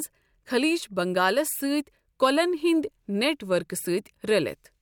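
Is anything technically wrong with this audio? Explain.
No, the speech signal comes through without any audible technical fault.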